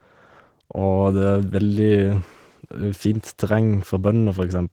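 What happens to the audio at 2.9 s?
At 2.9 s, as throughout, Opus voice compression (hybrid, 16 kbps) codes detail coarsely, sounding hoarse and faintly robotic; spectrograms show blotchy energy above 8 kHz.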